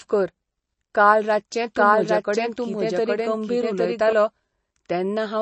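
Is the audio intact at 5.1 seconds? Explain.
No, MP3 compression is plainly audible at 5.1 seconds and throughout the clip. It likely comes from a low bitrate around 32 kbps, with weak frequency lines dropped and nothing above 8.3 kHz, so the speech sounds watery.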